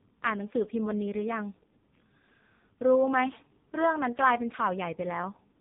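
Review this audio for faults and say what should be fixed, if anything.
Buzzy, synthetic speech throughout the whole recording, with nothing above about 3.7 kHz: the signature of the AMR narrowband mobile codec. Its vocal-tract model, fed very few pulses per frame, sounds heavily starved, which fits one of its lowest bitrates, around 5 kbps. To prevent it, capture or route the call over a wideband path, or at least a higher AMR mode.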